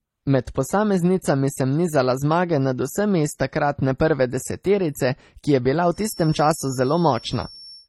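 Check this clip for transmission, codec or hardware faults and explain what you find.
Two faults are present: a layered codec sound across the whole recording, and a whistle in its last two seconds.

Transcoding between lossy codecs runs throughout. The speech was likely encoded twice: the texture fits low-rate MP3 at around 32 kbit/s, followed by HE-AAC at a similar rate. The second encoder treats the first one's artefacts as real signal and spends bits reproducing them while adding its own. Both sets of artefacts are audible together, and nothing remains above 16.2 kHz.

A feedback whistle runs from 5.89 s to the end of the clip. The path from loudspeaker back to microphone likely sat just at the edge of instability, so a single 5.4 kHz tone kept ringing without growing into a howl. It sits about 25 dB below the speech as a thin, steady whine that swells and fades slowly in level behind the voice.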